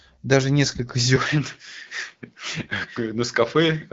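Short speech recording, carried over AMR wideband (HD Voice) at what sounds like 12.65 kbit/s, so the codec itself only leaves light coloration. The real trouble is AMR bit errors in two bursts: 0.64 to 0.72 s, about four 20 ms frames' worth, and 2.55 to 2.70 s, closer to seven frames. The less protected bits got flipped at a rate of several percent, so the excitation pulses and the fine gain and spectral values come out wrong, and the voice goes hoarse and gargly for a moment while roughly holding pitch and level. At 1.16 s the sound turns duller and drops about 5 dB, with nothing above 6.3 kHz and a faint new noise floor well below the speech. There's no gap at the change, which stays to the end, and it's most likely the input switched to a poorer device mid-recording.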